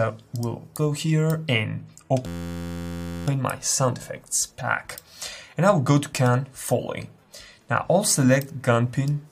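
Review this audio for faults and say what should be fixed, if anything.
A system hang loop runs from 2.26 to 3.27 s. The computer or audio driver stalled while the sound hardware kept replaying its last buffer. One 11.61 ms slice repeats exactly, about 87 times. The short loop produces a steady buzz at 86.1 Hz in place of the audio. That length fits a 512-sample buffer. Little or no audio is lost once the system recovers. To prevent it, keep the audio thread from being starved or blocked.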